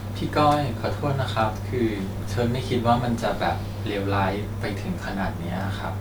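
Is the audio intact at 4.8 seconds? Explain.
Yes, the speech at 4.8 seconds plays through intact, with no dropout, glitch or other fault at that moment.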